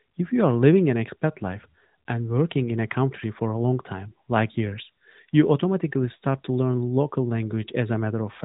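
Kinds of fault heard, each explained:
No faults found in the speech; nothing to report.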